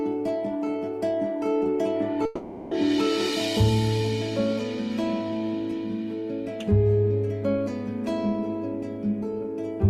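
From 2.25 to 2.73 s, the sound smears into a fading buzz and resumes with that half-second missing. This is likely a long network dropout, concealed by the receiver.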